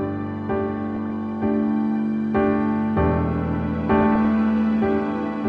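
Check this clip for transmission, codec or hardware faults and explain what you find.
Two short bursts of DAB burbling are the only faults heard. DAB burbling occurs from 0.76 to 1.1 s and again from 3.94 to 4.33 s. Weak reception lets bit errors, at roughly a third of a percent, slip past error correction into the MP2 data. Corrupted samples put short blips of noise in single sub-bands, and corrupted scale factors make sub-bands leap in level for up to a frame, across what sounds like nearly twenty frames per burst. The result is a burbling garble over the audio.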